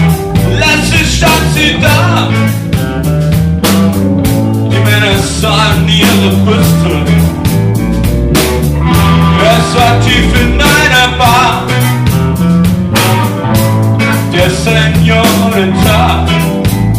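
Hard clipping runs through the whole clip: the signal was pushed about 10 dB past what the stage could pass, so around one sample in twenty has its peaks sheared flat. Unlike soft saturation's rounded warmth, these abrupt corners spray high harmonics, giving a harsh fuzz on loud moments.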